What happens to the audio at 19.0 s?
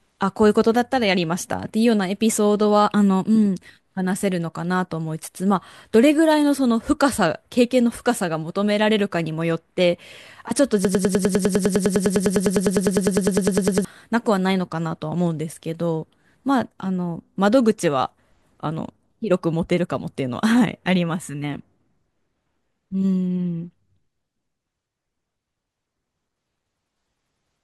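Nothing goes wrong at 19.0 s; the speech runs through that moment intact, with no dropout, click, distortion or other fault.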